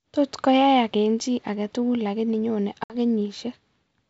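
Right after "chi aketugul lakini nyone", at about 2.84 s, there's packet loss on an ADPCM call: a hard-edged hole of silence where about 60 ms of audio, a few packets' worth, just drops out. The decoder's adaptive predictor and step size lose track of the sender's, so when speech comes back it sounds slightly distorted. That's settled by about 2.95 s. The G.722 wideband coding around it still sounds clear and open up top.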